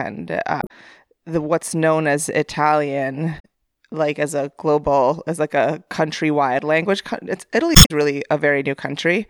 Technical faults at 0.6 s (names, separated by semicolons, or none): damaged data in a compressed stream